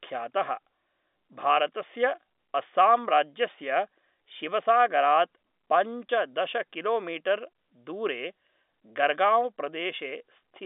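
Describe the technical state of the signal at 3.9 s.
At 3.9 s the speech is intact, carried over an ordinary G.711 telephone channel whose band ends below about 3.8 kHz, with no fault present at that moment.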